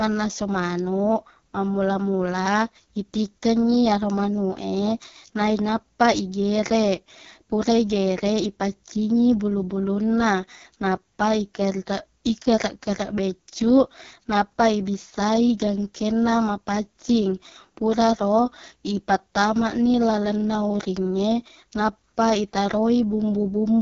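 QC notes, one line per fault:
Throughout, AMR wideband (HD Voice) codec: the speech is rough and raspy, with a buzzy, grainy edge, and nothing reaches above about 6.9 kHz. The codec rebuilds speech from a simple vocal tract model driven by a sparse train of pulses, and at its lowest rates that excitation is too coarse to capture natural detail. The heavy damage fits the 6.6 kbit/s mode, while the top band is only shaped noise.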